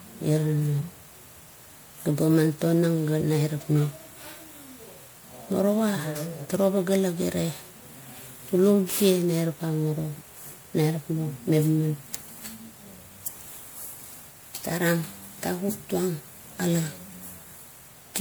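Throughout the speech there is generation loss: a swirly, hollow, smeared quality with softened consonant attacks, more degraded than a single pass at around 128 kbit/s MP3 would give. The likely cause is repeated re-encoding, about four times, each pass adding new quantisation noise and spectral holes.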